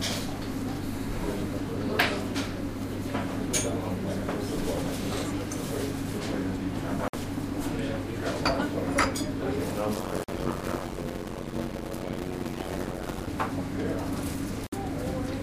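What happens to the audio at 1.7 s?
Nothing goes wrong at 1.7 s; the sound plays through that moment intact, with no dropout, click or other fault.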